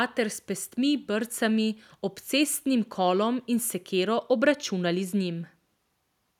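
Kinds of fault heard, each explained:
No kinds of fault are heard in the speech.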